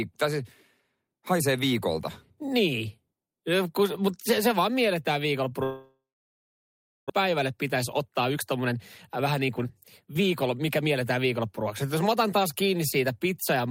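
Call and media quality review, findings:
Long network dropout, 5.63–7.12 s, right after "se se vaan mielletään". Last sound stretched into fading buzz, then about 1.05 s of silence; roughly 1 s of speech never played. Likely cause: packet loss burst at the receiver, with concealment giving up.

Jitter buffer speed-up, 7.22–11.63 s, ending before "jos mä otan taas". Speech runs at 110% with pitch unchanged and sounds hurried. The receiver's buffer trimmed repeated pitch-period slices, roughly 0.4 s in total, to work off the delay built up during the dropout.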